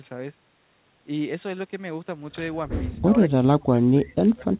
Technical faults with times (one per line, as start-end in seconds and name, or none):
3.06-4.57 speech suppressed in double talk